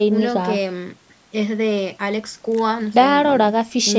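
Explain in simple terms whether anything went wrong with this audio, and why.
Nothing went wrong here: the speech just sounds like it came through a call microphone, which trims away the deepest bass and keeps nothing above about 8 kHz, and that's normal rather than a fault.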